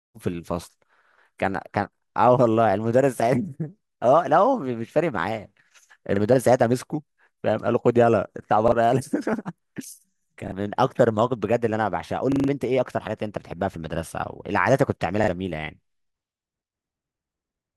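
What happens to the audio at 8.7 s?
Right around there, from 8.68 to 8.72 s, there's a repeated buffer. Fresh audio didn't arrive in time, so the device replayed the last 40 ms chunk once more. You hear a quick stutter with a hard join, and roughly 40 ms of speech gets skipped.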